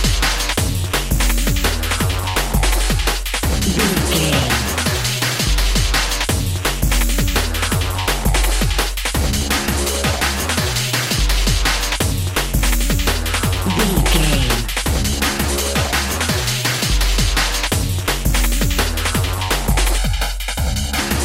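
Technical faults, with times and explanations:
19.98 to 20.99 s, channel delay (comb filtering): for about a second, one channel arrives roughly 1.5 ms behind the other, and when the two are summed to mono, shared content cancels at evenly spaced frequencies starting around 400 Hz. The sound turns hollow and phasey. Unlike a flanger or phaser, the notches stay put rather than sweeping, and unlike plain low-pass dullness, the dips repeat right up the spectrum instead of forming a single roll-off.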